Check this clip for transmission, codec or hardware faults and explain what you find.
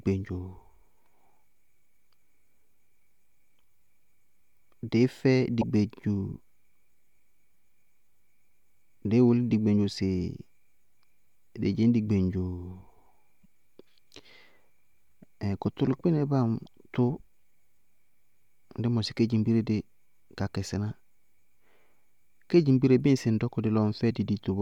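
Three short glitches break up the speech, at 5.61 to 5.63 s, 13.43 to 13.46 s and 16.65 to 16.67 s. Each lasts about one 24 ms frame. The likely cause is a broken MP3 bit reservoir: a frame borrowed data from a lost earlier frame and decoded the wrong bytes.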